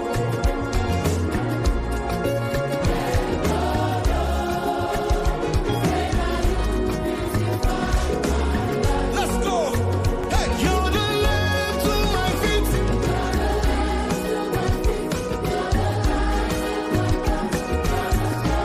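From 9.07 to 10.43 s, a scratch or blemish on the disc wipes out more data than the player's error correction can rebuild, once on every turn of the disc, so the player has to patch or mute the damaged samples. The result is CD scratch ticks: eight short ticks, the longest only a couple of milliseconds, spaced evenly at roughly six per second, so the gaps line up with the disc's rotation.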